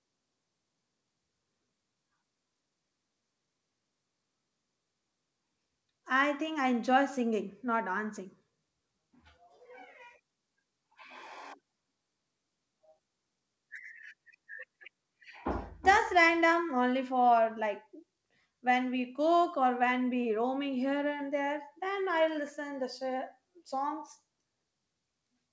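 Speech carried over a call path, with nothing above 8 kHz in a way that fits a wideband codec such as G.722 at 64 kbps, and no technical faults present.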